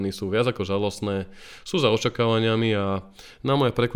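No technical faults turn up anywhere in this speech recording, so there's nothing here to flag.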